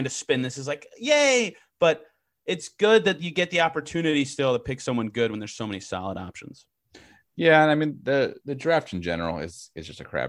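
No technical faults found anywhere in the recording.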